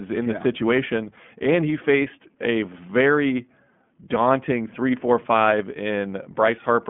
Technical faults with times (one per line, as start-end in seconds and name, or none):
0.00-6.90 iLBC codec